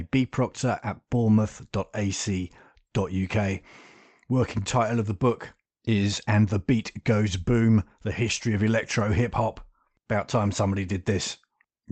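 No technical faults are audible.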